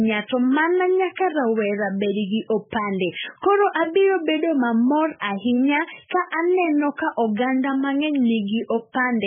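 From start to finish the speech has nothing above 3.5 kHz and a watery, swirling texture, with s sounds smeared into metallic chirps. The cause is likely MP3 compression at a very low bitrate, around 8 kbps: the encoder cut the treble and kept dropping weak frequency lines frame by frame. That flickering is what sets heavy codec damage apart from a simple low-pass filter, which dulls the sound without making it bubble.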